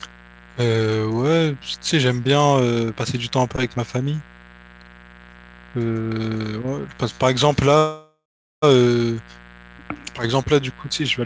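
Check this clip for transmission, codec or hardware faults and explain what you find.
Two faults are present in this speech clip: a mains buzz that runs the whole length, and one call audio freeze near the end. The band-limiting to nothing above 8 kHz, consistent with a wideband call codec such as G.722, is a property of the call path rather than a fault.

Mains buzz, throughout: a steady, raspy buzz sits under the speech at roughly 25 dB below it. It is built on a 60 Hz fundamental. Sharp switching spikes from a dimmer, rectifier or poorly shielded line occur twice per mains cycle, and those spikes produce a dense series of 60 Hz harmonics extending well up into the kilohertz range. That harmonic spread is why the buzz has a rasp to it rather than a pure low hum.

Call audio freeze, 7.78 to 8.64 s: for about 0.84 s the audio stalls. The last sound is drawn out into a fading buzz or hiss, then drops to silence for about 0.41 s before the speech resumes exactly where it left off. 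The likely cause is packets held up in transit, which leaves the receiver's jitter buffer empty so that it has to fill the wait. Nothing is lost. An 844 ms gap has simply been inserted, and everything after it runs that much later.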